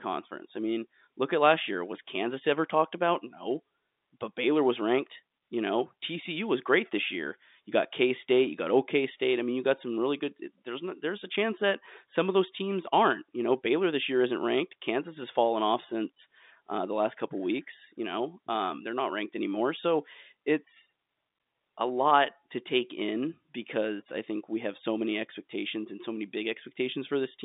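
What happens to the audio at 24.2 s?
Nothing goes wrong at 24.2 s; the speech carries on intact there, heard through the same narrow telephone band as the rest of the call.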